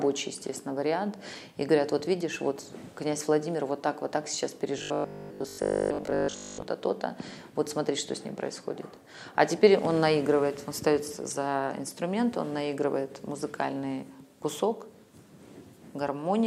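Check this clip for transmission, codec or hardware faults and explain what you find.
One fault is present. From 4.78 s to 6.62 s the sound turns into a robotic, metallic buzz with a fixed pitch of 50 Hz that roughly keeps the shape of the underlying audio. This is likely robotic sound from repeated short buffers: audio arrives too seldom, so the same 20 ms slice is replayed to fill the gaps. Most of that stretch is repeated material, and repeating the slice imposes the constant 50 Hz pitch.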